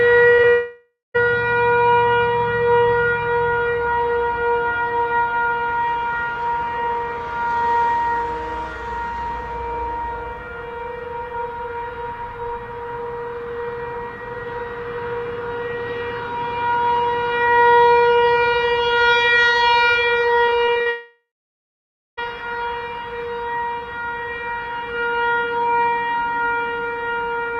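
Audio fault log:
0.35 s and 0.42 s to 0.45 s, short concealed packet loss: two brief holes, each about 20 ms of missing audio, reached the decoder too late to play. The receiver bridged each one by extending the preceding sound, about 28 ms and 10 ms of patched signal, then crossfaded back into the real stream. The result is a quick smear or wobble right at the start of the clip, just before the larger break that follows.
0.49 s to 1.16 s, long network dropout: roughly 660 ms of audio failed to arrive, likely from a stall in the network path. The receiver kept synthesising from the last sound it had, so a fading buzz or hiss carries through the gap, decaying to about 180 ms of silence before real audio resumes. What was in that stretch is simply gone, and the sound picks up further along.
20.46 s to 20.88 s, repeated packet loss (robotic sound): six separate gaps land within this short span, the longest about 40 ms, totalling roughly 140 ms missing. 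Each hole is filled by stretching the previous fragment, and about a third of the span ends up concealed rather than real. Because the patches come back to back, the sound turns choppy, with pieces dropping out between the filled stretches.
20.90 s to 22.19 s, long network dropout: immediately after that choppy run, about 1.28 s of audio never arrives, likely a longer network outage. Concealment again continues the last sound as a fading tone or noise, but it cannot sustain that long, so roughly 900 ms of the gap ends as silence. When audio returns, the content from this whole stretch is missing.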